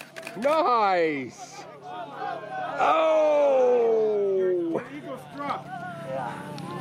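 A nearby 2G phone's signalling bursts are rectified by the audio circuitry from 4.71 to 5.82 s, producing GSM signalling bursts: a galloping dit-dit-dit of short 217 Hz buzzes, faint beneath the sound.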